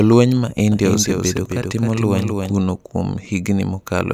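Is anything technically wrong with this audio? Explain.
Yes. From 0.72 s to 2.60 s the speech has a doubled audio track. A second, full-band copy of the same audio runs roughly a third of a second behind the original, around 5 dB quieter, with no decay or room colouring. It cuts in and out abruptly at both ends. The likely cause is the signal being captured twice, once through a slower path, or an edit leaving two offset copies stacked together.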